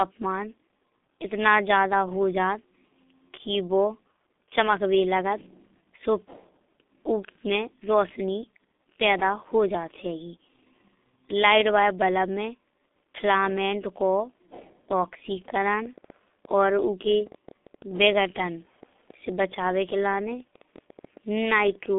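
Right from the start the whole clip has been through the G.723.1 codec, and heavily. Nothing gets past about 3.8 kHz, and the band feels squeezed to roughly 200 Hz to 3.6 kHz. The voice comes out muffled and husky, consonants smeared, which fits that codec's low-rate mode of around 6 kbit/s.

From 15.86 s to 21.94 s a train of clicks sits on top: roughly fifty similar pops at about 9 per second, unevenly spaced, and about as loud as the speech itself. They tick through the gaps too, most likely from electrical interference or a struggling interface.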